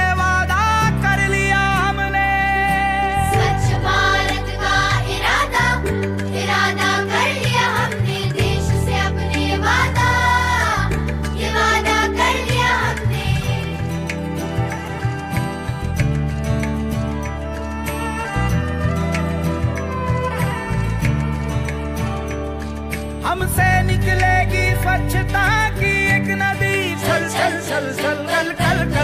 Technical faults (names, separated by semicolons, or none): none